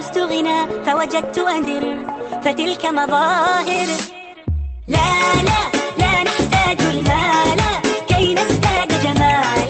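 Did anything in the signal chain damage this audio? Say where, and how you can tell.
Yes. A skip ahead occurs in the network and jitter buffer stage, at 1.63 to 1.65 s. The sound jumps forward with no gap and no fill. Roughly a second of audio is missing. That stretch was dropped, either on the way or by the buffer, while later audio was already waiting.

A jitter buffer speed-up follows in the same stage, from 1.78 to 4.83 s. Playback runs at 111 percent with unchanged pitch, so it sounds hurried. The receiver trimmed short pitch-period slices repeatedly, removing about 0.4 s to shrink its excess delay.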